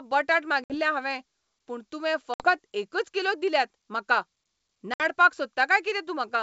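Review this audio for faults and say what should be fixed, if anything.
Hard-edged silent gaps cut into the speech at 0.64–0.78 s, 2.34–2.49 s and 4.94–5.01 s, each followed by brief, slight distortion as sound resumes. This is packet loss on an ADPCM call: about 60 ms of audio, a few packets, goes missing each time and is filled with silence. The G.722 decoder's adaptive predictor and step size then no longer match the sender's, so the first tens of milliseconds afterward come out distorted before it resynchronises. Use jitter buffering with packet loss concealment, and reset or resynchronise the ADPCM decoder state after a gap, to prevent it.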